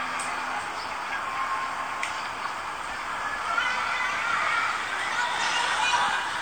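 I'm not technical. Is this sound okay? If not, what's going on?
Yes, nothing stood out as a problem when listening to this sound.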